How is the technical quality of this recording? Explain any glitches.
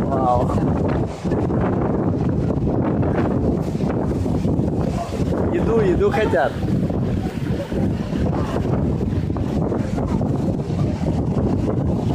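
The recording has one glitch: chunks out of order at 7.30 to 7.32 s. For about 20 ms, one 10 ms chunk of audio arrived or was written one chunk late, so it plays after the chunk that should have followed it. No audio is missing, but the two chunks are swapped, creating three hard joins where the waveform jumps instead of continuing smoothly. The result is a brief jumbled flicker in the sound.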